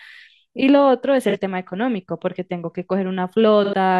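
AAC frame loss with concealment hits at 1.29 to 1.36 s and 3.64 to 3.74 s. Gaps of about 43 and 85 ms, fitting one and two frames, get refilled from earlier spectra. The speech briefly smears.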